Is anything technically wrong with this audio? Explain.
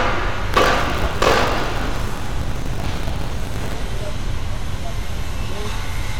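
Yes, there is buffer tearing from 0.52 s to 3.74 s. The writing program and the playback hardware have drifted out of step, so each 20 ms period mixes fresh audio with roughly two-fifths stale audio from around 40 ms earlier, spliced with hard joins. The result is a rattling, robotic 50 Hz buzz riding on the sound. On a waveform the joins show as regular discontinuities every 20 ms. A spectrogram shows vertical clicks and comb-like 50 Hz sidebands.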